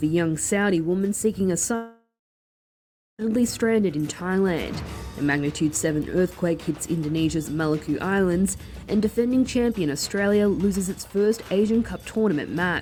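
A long network dropout runs from 1.75 s to 3.22 s. The sound stops being continuous and turns into a brief fading buzz or hiss carried on from the last moment before the gap, then about 1.07 s of silence. This is most likely a stretch of about 1.44 s of audio that never arrived, which the receiver papered over for 1.43 s by extending and fading what it last had. When the sound resumes, it has skipped ahead, and the missing portion is simply gone.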